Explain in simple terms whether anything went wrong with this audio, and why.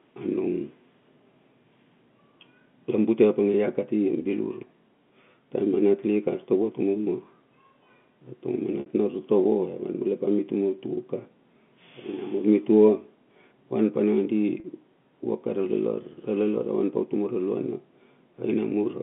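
Two brief dropouts of packet loss with pitch repetition occur, at 8.8 s (60 ms) and 14.6 s (40 ms): the receiver repeats the last pitch cycle, giving a short buzzy hold.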